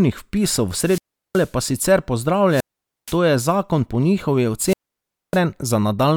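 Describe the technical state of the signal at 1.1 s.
A wireless microphone squelch dropout runs from 0.77 to 1.53 s: the fading radio signal brings up static, then the receiver mutes for about 370 ms before the speech returns.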